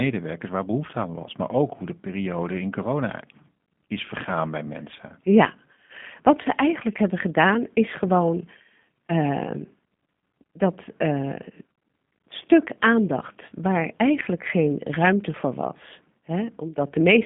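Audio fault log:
Throughout, G.729 codec. Speech sits in a band of 150 Hz to 3.5 kHz, with nothing above 3.6 kHz. It sounds plainly rough and synthetic. Each 10 ms frame is rebuilt from a vocal tract model and a few pulses. This fits 8 kbit/s G.729A.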